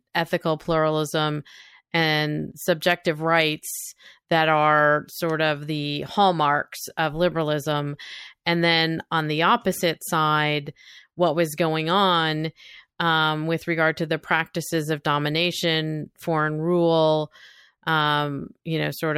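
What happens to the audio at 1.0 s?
Nothing goes wrong at 1.0 s; the speech passes through intact at that moment, with no dropout, click or distortion to be heard.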